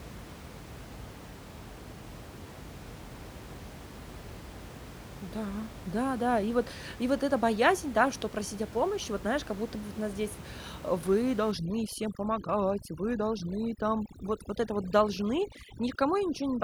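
From 11.52 s to the end of the clip at 16.63 s, overdone noise removal sets in. The room noise, until then sitting steadily about 15 dB below the speech, drops away and breaks up into twinkling specks. A noise reducer pushed too hard is cutting individual frequency bands whenever they sit close to its noise estimate, taking the quieter parts of the speech with them. Unlike a noise gate, which mutes everything at once, the damage here is scattered band by band.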